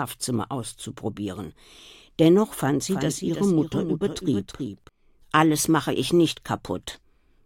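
A second, slower capture path likely fed the same audio in again, producing a doubled audio track from 2.89 to 4.89 s: a dry copy about 300 ms late and roughly 5 dB quieter, switching abruptly on and off.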